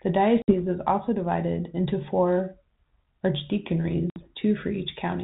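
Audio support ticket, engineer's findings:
Packet loss on an ADPCM call at 0.42 to 0.59 s, just before "is also divided into", and at 4.1 to 4.24 s. Each is a hard-edged 60 ms hole, a few packets' worth, on the 32 kbit/s G.726 path. Decoder predictor and step size lose sync with the sender, so audio resumes with brief distortion before it settles.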